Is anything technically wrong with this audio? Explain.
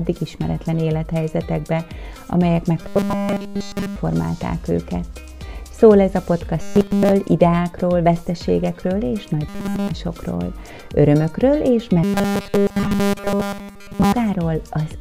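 Yes. Robotic sound from repeated short buffers occurs at 2.81–3.96 s, 6.61–7.12 s, 9.49–9.91 s and 12.04–14.13 s. The audio collapses into a rigid 200 Hz metallic buzz, likely because a roughly 5 ms chunk is looped while fresh audio is skipped. Unlike comb filtering, its pitch stays fixed.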